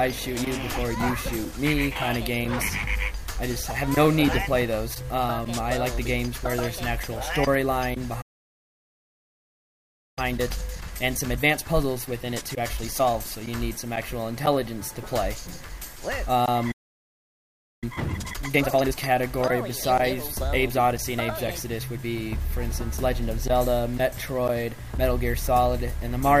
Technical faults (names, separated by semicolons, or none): playback stall; time-compressed catch-up